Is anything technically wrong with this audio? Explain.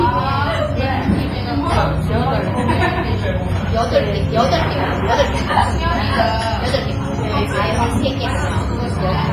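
Yes. Heavy transform-codec damage runs through the entire clip, and it sounds like WMA compression was likely the cause. Quantisation noise smears across tens of milliseconds around each event, giving a ringing, washy texture with hiss that swells and fades with the sound, and weak detail drops out, which fits a low bitrate near 24 kbps. On a spectrogram, content stops at a hard ceiling of 15.5 kHz, with blocky gaps and haze smeared before and after onsets.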